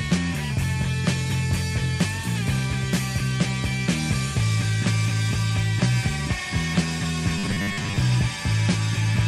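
From 7.4 s to 8.0 s the sound turns into robotic sound from repeated short buffers. It becomes a rigid, metallic buzz at 100 Hz. That rate means each repeated chunk lasts 10 ms. The likely cause is audio arriving too seldom, so the software loops the last short buffer to fill the gap. About half of this stretch is repeated material, and the real audio in between is skipped. The original shape survives only roughly.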